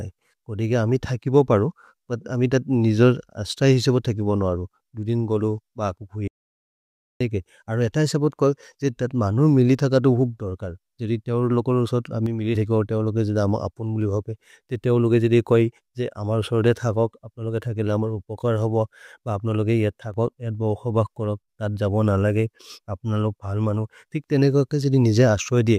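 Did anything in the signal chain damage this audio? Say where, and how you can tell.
Yes. Between 6.28 s and 7.21 s the speech cuts off mid-flow and the audio drops out to silence for about 0.93 s. It is silent with no room tone, then the speech resumes abruptly. The waveform shows a flat line with hard edges, and the spectrogram shows a fully black column. This is likely an input or device link failure at the capture stage, with the recorder still writing zeros, so whatever was said in that gap is lost.

One channel drops out twice, from 12.26 s to 12.55 s and from 20.03 s to 20.14 s. The first falls between "जोदि तेओर् लोकलो सोत्" and "थकिबो तेओर् लोके जिद". In both, the speech keeps going but steps down by about 6 dB, which is what a mono sum does when one side goes dead. This is likely a wiring or interface fault in one leg of the stereo path. On the waveform the envelope halves for a short block, and the spectrogram dims evenly across all frequencies.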